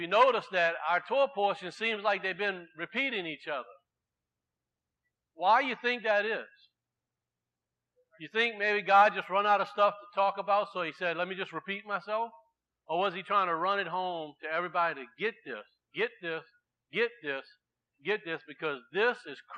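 Nothing in the audio points to a technical fault at any moment. There are no events to place on its timeline.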